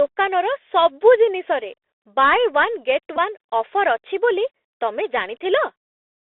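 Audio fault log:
throughout: Bluetooth CVSD headset codec. The whole speech clip sits in a narrow phone-style band, roughly 300 Hz to 3.6 kHz, so there's no low body and nothing bright up top. The codec damage is plainly audible. CVSD sends one up-or-down bit per sample, which fits a 64 kbps stream, and its adaptive step can't keep up with fast, loud high content. That gives you scratchy, smeared s sounds and a grainy hiss running under everything.
3.17 to 3.19: Bluetooth headset packet repeated. For about 11 ms the headset link dropped audio and the chip re-decoded the last good chunk rather than going silent. That span fits three lost 3.75 ms packets in a row. Repeating the same slice every 3.75 ms sets up a periodic pattern near 267 Hz, so instead of a gap you get a brief buzzy blip before clean packets pick up again.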